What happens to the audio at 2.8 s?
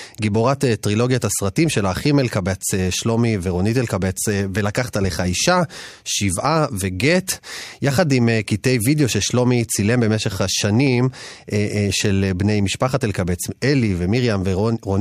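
Nothing goes wrong at 2.8 s; the speech continues intact through that moment, with no dropout, click or distortion.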